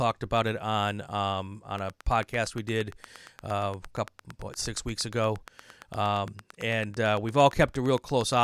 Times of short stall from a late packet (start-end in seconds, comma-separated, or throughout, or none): none